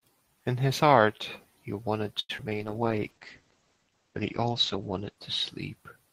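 Speech, with a burst of network faults just after 2.2 s. At 2.19 s a short stall from a late packet holds the current sound for about 98 ms, until 2.31 s. The jitter buffer ran dry, so the receiver stretched the last sound. Nothing is lost, but the sound lingers with a slight buzz. At 2.37 to 2.40 s there is a skip ahead. Roughly 70 ms of audio was discarded while later audio was already queued. Playback jumps forward, and the two sides are joined almost directly. Two short concealed packet losses follow, at 2.44 to 2.47 s and 2.49 to 2.53 s. Each is a 20 ms hole that the decoder patched by extending the preceding sound. Each is heard as a brief smear or wobble. From 2.55 s to the end, a call bitrate drop takes the stream from 32 to 11 kbps. The audio bandwidth shrinks from 20 kHz to 8 kHz. The encoder, told that bandwidth was scarce, codes more coarsely and removes the top end. The sound turns muffled and rough, and it stays at the lowest rate for about 2.3 s. 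Inside that stretch, from 2.84 to 3.43 s, a jitter buffer slow-down plays the audio at 90% speed. It adds 70 ms by repeating pitch periods to rebuild the buffer's reserve. Sounds are drawn out at unchanged pitch.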